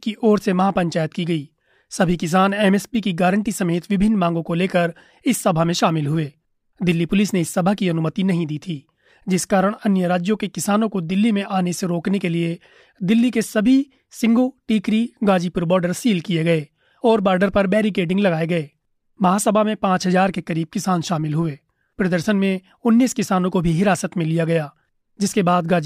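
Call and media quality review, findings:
Nothing to flag here; the speech comes through without any audible problems worth raising.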